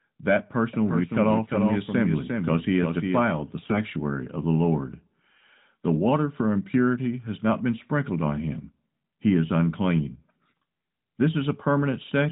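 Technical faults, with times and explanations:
3.60–3.80 s and 10.34–10.57 s, AMR bit errors: on a weak radio link, a few percent of the less-protected bits in the AMR frames arrived flipped, while the checksum over the critical bits still passed, so the frames were decoded anyway. Over these roughly 0.2 s stretches, one just before "of the" and one just after "is unclean", the excitation pulses land in the wrong places and the fine pitch, gain and spectral values drift. The speech keeps roughly its pitch and level but turns hoarse, scratchy and gargly, against the 4 kHz-limited AMR-NB 12.2 kbps sound around it.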